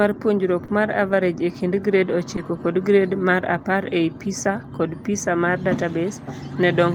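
At 0.65 to 0.70 s the speech holds on one sound a beat too long: a short stall from a late packet. The jitter buffer ran dry, so the receiver stretched the last audio by about 30 ms, then resumed where it stopped, losing nothing.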